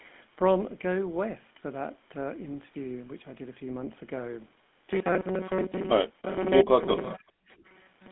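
The whole clip runs through the GSM full-rate codec: a buzzy, gravelly coarseness from its pulse-driven vocal model, a sound that fits a 13 kbps coder, with nothing above 3.8 kHz. From 6.64 to 6.72 s the speech dips by about 25 dB, likely the echo canceller turning everything down while both sides talked at once, so it's speech suppressed in double talk. At 7.03 to 7.13 s there's an echo leak, a faint copy about 20 dB down arriving 308 ms late, likely loudspeaker pickup the canceller missed. The same double-talk suppression returns at 7.16 to 7.25 s and 7.44 to 7.49 s, chopping the speech with brief drops of about 25 dB.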